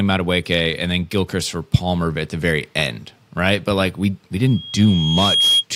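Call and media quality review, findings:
Mic–speaker loop unstable at 3.3 kHz: loudspeaker feedback squeal after "like we we", 4.47–5.65 s; tone swells over a second to about 5 dB above speech.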